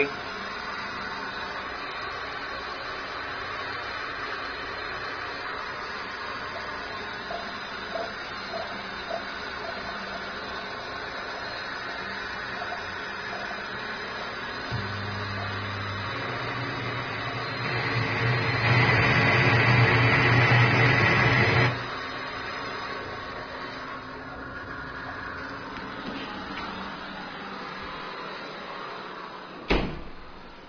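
No technical faults can be heard anywhere in the audio.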